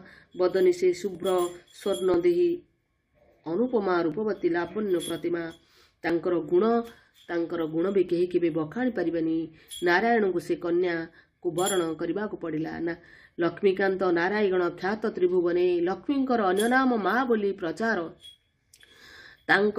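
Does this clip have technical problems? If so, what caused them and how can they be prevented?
Yes. Brief clicks or tiny skips land at 1.15, 2.14, 4.12, 5.10, 6.10 and 8.09 s, spaced on a one-second grid. This is overlap between stream segments: neighbouring 1-second segments carry overlapping timestamps, so the player discards roughly 10 to 20 ms of audio that was never duplicated, and the waveform jumps. Preventing it means stamping each segment so it begins exactly where the previous one ends.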